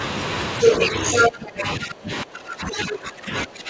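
Other side's voice leaking through, 0.61 to 1.32 s: a second voice rides over the talker, clearly louder than them, at roughly 10 dB above. This is likely far-end audio from the device's loudspeaker that reached the microphone and was not fully removed by the echo canceller. It returns briefly from 2.79 to 2.83 s as a faint scrap, well below the talker's level, in a band that stops at 8 kHz, as expected of G.722.

Speech suppressed in double talk, 1.29 to 3.7 s: right as the leak ends, the talker's own voice sinks and turns dull and patchy to the end of the clip, dropping at its deepest by about 20 dB. Both sides were likely speaking at once, and the echo canceller, unable to tell the talker apart from the loudspeaker echo, attenuated everything.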